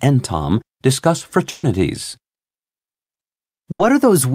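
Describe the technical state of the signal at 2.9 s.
At 2.9 s the speech signal is intact, with no audible technical fault.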